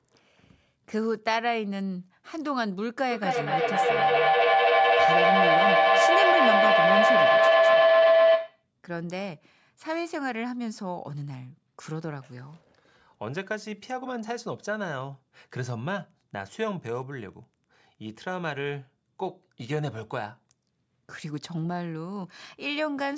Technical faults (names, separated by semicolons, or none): feedback howl; Wi-Fi interference